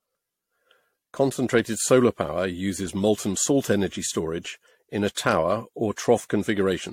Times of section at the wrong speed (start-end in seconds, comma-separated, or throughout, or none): none